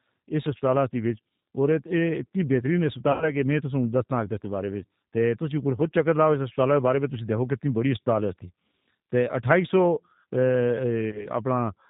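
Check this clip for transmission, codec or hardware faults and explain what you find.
Two faults are present: low-bitrate codec coding across the whole clip, and two packet-loss gaps filled in by the decoder.

The G.729 codec runs throughout, at 8 kbit/s. It rebuilds the speech from a vocal tract filter, a pitch predictor and a few pulses per frame, and passes nothing above 4 kHz. The result is band-limited, slightly rough and synthetic-sounding speech, with plainly audible coding damage.

VoIP packet loss concealed by the speech codec occurs at 3.12 to 3.31 s, where about 90 ms was lost, which fits three consecutive packets, and again at 11.10 to 11.30 s, where about 30 ms was lost, consistent with a single packet. In each gap the decoder extends its last pitch and filter with falling gain, giving a fading buzzy tone or coloured noise. The speech stays weakened briefly after real packets resume.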